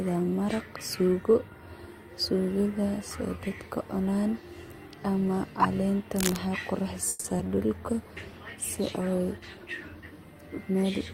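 At 6.16 to 6.38 s a burst of harsh scratching and rustling sits over the speech, nearly as loud as the speech itself. This is cable scratch noise, likely from a worn cable, connector or control being moved so that its contact resistance jumps about rapidly.

From 7.09 to 7.26 s the sound stalls into a fading buzz for about 150 ms, then resumes exactly where it stopped, so nothing is lost and the rest arrives later. This call audio freeze is likely caused by delayed packets emptying the jitter buffer while the receiver stretched the last sound.

At 7.38 to 7.41 s a brief smear appears. About 40 ms of audio is gone, bridged by only about 10 ms of synthesized fill, which pulls the timing about 30 ms earlier. This is short concealed packet loss: the receiver continued the last sound and then blended back into the real signal.

From 7.76 to 10.10 s the speech turns rougher and more watery. This fits a call bitrate drop from about 32 kbps to 18 kbps, held at its lowest for about 2.3 s, as the encoder coded more coarsely after the bandwidth estimate fell.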